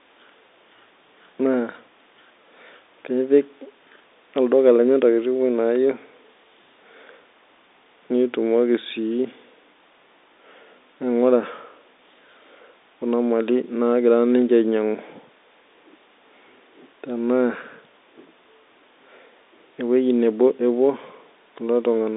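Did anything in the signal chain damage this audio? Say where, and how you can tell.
No, nothing in the chain has harmed it: the speech sits in a telephone band of roughly 250 Hz to 3.7 kHz with nothing above 3.8 kHz, which is what G.711 telephone coding (here pointing to the 64 kbps mu-law variant) does by design, and any quantisation noise it leaves is at most faint and tracks the speech level.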